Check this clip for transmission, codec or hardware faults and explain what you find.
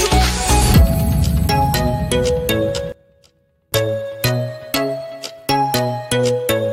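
One fault stands out. From 2.92 to 3.72 s the sound collapses, dropping by about 24 dB and turning faint before returning at full level. This is most likely one channel inverted: one side of the stereo pair has its polarity flipped, so when the channels are summed to mono, everything common to both cancels. Only the small difference between them survives, leaving that faint remnant for the 0.8 s it lasts.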